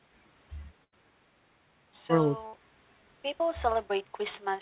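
At 0.84 s and again at 2.46 s the speech breaks up in a burst of packet loss. Consecutive audio went missing, and the receiver papered over it by extending and fading the last sound, about 81 ms of fill in the first case and 66 ms in the second. The result is a short held, fading smear before speech resumes at 0.94 s and 2.55 s, roughly 80 ms and 60 ms further on. Throughout, the band stops at 4 kHz, consistent with G.711 mu-law.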